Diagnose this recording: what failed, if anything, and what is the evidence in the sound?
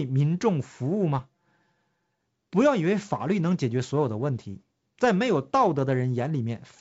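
From about 1.19 to 2.20 s the speech goes hollow and phasey. One channel lagging by roughly 5 ms before the mono sum points to channel delay (comb filtering), with cancellation notches starting near 100 Hz.

At 3.46 to 3.54 s there are pops and rough bursts. These are bit errors on an ADPCM link in the G.722 path (64 kbit/s, otherwise clean). Each flipped bit throws off the decoder's predictor, so the damage rings on briefly.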